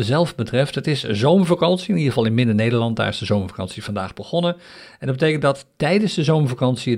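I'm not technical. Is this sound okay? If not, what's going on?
Yes, there's nothing technically wrong with this recording: the signal comes through steady and intact, with no dropouts, glitches or level problems anywhere in it.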